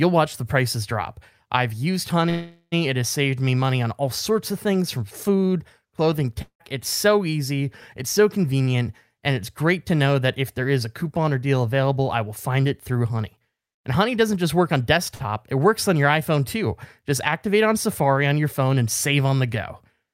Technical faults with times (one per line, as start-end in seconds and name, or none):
2.29-2.74 call audio freeze
6.42-6.62 long network dropout
8.03-8.82 jitter buffer speed-up
13.10-13.46 jitter buffer speed-up
15.15-15.21 short stall from a late packet